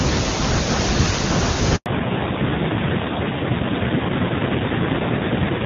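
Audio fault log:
1.76–1.86 s, handover gap: the speech cuts out abruptly, fading within a few tens of milliseconds into 100 ms of silence. The call was passed from one network to another, and no speech frames arrived until the new link began carrying audio, so whatever was spoken then is lost.
1.86 s to end, fallback to narrowband: after the gap the speech turns duller, boxier and rougher, with nothing above 4 kHz. Before the switch it had the crisp HD Voice top end. The call dropped to an older narrowband codec, whose rougher texture fits AMR-NB at around 7.4 kbit/s.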